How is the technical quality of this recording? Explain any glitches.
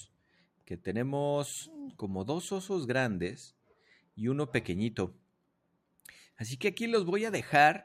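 The recording has one recurring fault, sound cut by the noise suppressor. From 0.07 to 0.70 s, 3.51 to 4.17 s and 5.17 to 6.05 s, parts of the sound dip by about 12 to 13 dB, because the suppressor mistook them for noise and pulled them down.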